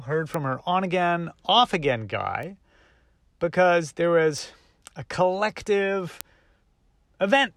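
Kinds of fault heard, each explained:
Bit error spike: one flipped bit throws a single sample way off and straight back, so you hear lone sharp ticks at 0.34, 2.43, 4.38 and 6.21 s.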